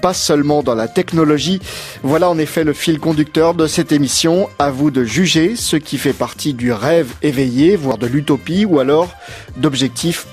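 Likely dropped buffers (overrun) left gaps that were spliced shut, so the audio jumps ahead at 4.03 s, 7.92 s and 9.32 s, skipping roughly 20, 70 and 40 ms.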